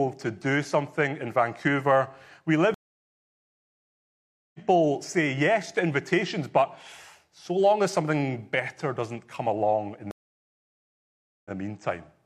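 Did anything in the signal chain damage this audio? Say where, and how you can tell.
Yes. Two stream reconnects, a network-stage fault, at 2.74 to 4.60 s and 10.11 to 11.51 s. Each time the speech drops into silence, lasting 1.80 s the first time and 1.34 s the second, because the connection broke and the player had to reconnect and restart its decoder mid-stream. The first resumes roughly two seconds further on, skipping material as a live feed moves on. The second restarts 46 ms earlier, repeating a sliver the server resent.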